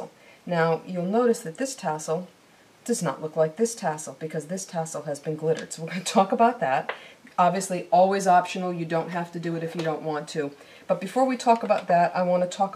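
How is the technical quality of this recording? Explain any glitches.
No technical faults are audible at any point.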